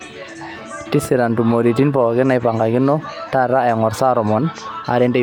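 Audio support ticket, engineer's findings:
No audible fault found on the speech clip.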